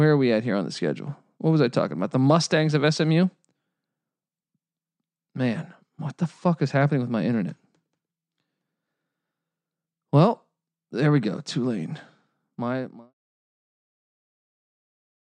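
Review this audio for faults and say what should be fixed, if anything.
Nothing needs fixing: the speech signal has no technical faults, and the smooth fade-out that begins around 12.5 s and finishes at 13.14 s is a deliberate, even taper with no click or abrupt edge.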